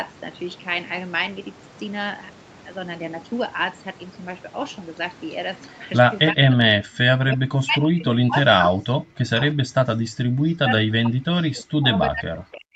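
From 5.68 to 5.8 s, a faint delayed copy of the speech comes through. It trails the original by 340 ms and sits far below it. This is an echo leak. The likely cause is a far-end loudspeaker whose echo canceller let some pickup escape.

From 6.31 s to the end, the speech is suppressed in double talk. The level dips and parts drop out, at worst by around 40 dB. Both sides talked at once. The echo canceller likely mistook the talker for echo and turned everything down.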